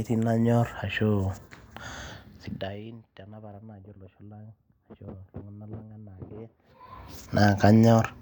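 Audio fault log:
2.11–2.83 s, zipper noise: the level falls by about 25 dB in 2 dB steps, roughly 20 a second. Each step is an instant, unsmoothed gain jump that puts a small click into the waveform, so a ticking rides over the sound for the whole fade.
6.53–7.01 s, zipper noise: the level rises by about 25 dB in the same 2 dB steps, now roughly 30 a second, so the clicks come closer together and the zipping sounds denser.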